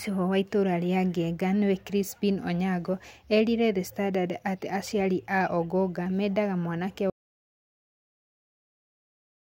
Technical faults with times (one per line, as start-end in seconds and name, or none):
7.10-9.43 audio dropout to silence